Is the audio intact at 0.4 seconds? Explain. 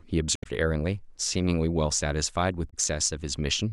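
No, 0.4 s falls in a stretch of damaged data in the compressed stream, 0.33 to 0.46 s. The decoder loses sync hunting for the next frame header, giving a brief glitch.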